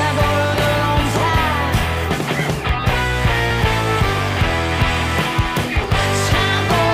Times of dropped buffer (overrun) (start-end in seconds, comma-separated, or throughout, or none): 1.83, 3.51, 5.84